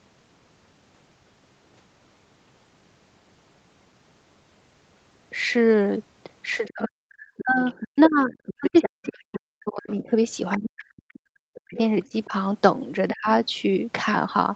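From 6.67 s to 10.21 s the speech sinks and breaks into pieces, with the worst dips falling about 40 dB and around three seconds of that stretch affected. This is speech suppressed in double talk: the likely cause is that both ends were talking together and the echo canceller, unable to tell the near talker from the loudspeaker echo, pulled both down. Inside that same window, from 7.37 s to 8.15 s and again from 8.46 s to 9.37 s, a second voice sits roughly 10 dB below the main speech. This is the other side's voice leaking through, likely because the echo canceller left part of the far end's loudspeaker playback in the microphone signal. The suppression returns from 10.56 s to 11.78 s, where roughly a second of speech drops by as much as about 40 dB. A shallower dip of about 10 dB follows at 12.09 s to 12.32 s, and a brief, deep cut comes at 13.11 s to 13.28 s. Through all of this the audio stays within about 8 kHz, which fits an Opus call path near 32 kbps.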